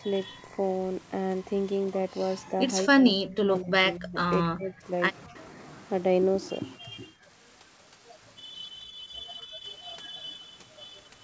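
The voice sinks and thins out in a run of dips between about 2.99 and 6.93 s: from 2.99 to 3.73 s it falls by about 25 dB, from 3.95 to 4.17 s by about 30 dB, from 4.45 to 4.86 s by about 20 dB, and at 5.27 to 5.37 s by about 35 dB, almost cutting out. The last, from 6.84 to 6.93 s, is a slight dip of about 5 dB. This is speech suppressed in double talk, likely caused by the far side talking at the same moment. The echo canceller could not tell the near talker apart from the loudspeaker echo, so it pulled both down.

From 9.42 to 9.57 s the room sound briefly drops by about 9 dB for roughly 150 ms and then comes back. This is background gated by the echo canceller. While the loudspeaker was active, the canceller clamped the microphone hard and took the ambient sound down with it, then let go. Throughout, the audio is band-limited to 8 kHz, which fits a G.722 call path at 64 kbps.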